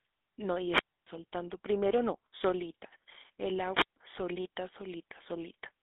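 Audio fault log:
Throughout: GSM full-rate codec. The speech has a buzzy, gravelly roughness, and the band is narrow, running from about 200 Hz to 3.6 kHz, with nothing above 3.8 kHz. The codec models the vocal tract as a filter and excites it with a sparse train of regularly spaced pulses at 13 kbps. Little of the true excitation detail survives, so voiced sounds take on that coarse, rasping edge, and the damage is plainly audible.
0.61–1.11 s and 3.71–3.96 s: wireless microphone squelch dropout. Each event begins with a short swell of hiss or static, then the sound drops into near silence before returning. The silent hole lasts about 275 ms in the first event and about 144 ms in the second. In both cases the radio signal from an analogue FM microphone faded below the receiver's squelch threshold, so the receiver muted its output until the carrier recovered.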